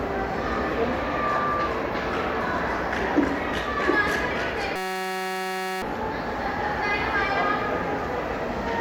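Loudspeaker feedback squeal at 0.83 to 1.80 s interrupts this recording of everyday sounds. A microphone is picking up the loudspeaker it feeds, and at 1.2 kHz the loop gain exceeds one, so a pure tone swells over a fraction of a second to roughly the level of the surrounding sound. A system hang loop follows from 4.76 to 5.82 s. The machine froze while the audio hardware kept replaying one 5.33 ms slice, which fits a 256-sample buffer, about 200 times over, producing a steady 188 Hz buzz in place of about a second of audio.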